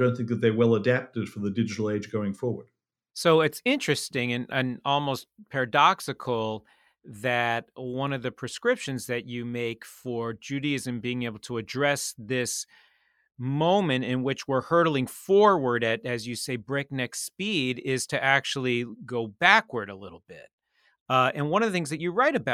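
A recording of speech, with no technical fault to report. Nothing at any point in the recording needs a time or a cause.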